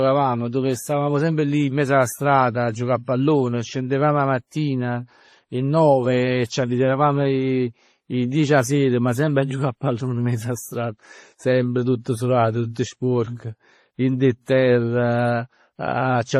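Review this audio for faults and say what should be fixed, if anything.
Across the whole speech recording there is a layered, smeared coarseness: one codec's artefacts and a second grit over that, with nothing above about 14.9 kHz. That combination likely comes from transcoding between lossy codecs, a low-rate MP3 encode, around 32 kbit/s, then re-encoded with WMA 1 at a higher rate such as 64 kbit/s. The second encoder spent bits reproducing the first one's artefacts while adding its own, and the extra bitrate could not restore what was already lost. To prevent it, encode once from the original uncompressed source.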